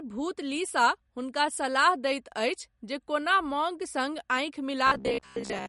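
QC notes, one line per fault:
Throughout: MP3 compression. The speech has nothing above 11.2 kHz, so the top end is cut flat, and the damage is plainly audible: a watery, swirly texture where weak detail flickers in and out between frames, plus smeared attacks. That's likely a lossy encoder short on bits, which fits a low bitrate around 48 kbps, dropping the treble at a fixed point and zeroing quiet components it decided you wouldn't miss.
4.87 to 5.68 s: robotic sound from repeated short buffers. For the last 0.8 s or so the speech turns into a rigid, metallic buzz pitched at 66.8 Hz. It still loosely tracks the talking. The likely cause is audio arriving too late, so the playback side loops the last chunk of about 15 ms to fill the gap. Most of that stretch is repeated material rather than fresh audio, and the loop length sets the buzz pitch.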